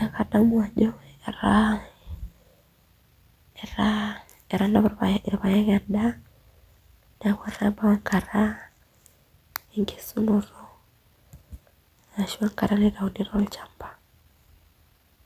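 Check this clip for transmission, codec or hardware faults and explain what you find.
No transmission, codec or hardware fault can be heard in this speech clip. There is nothing here that needs tracing back to a cause.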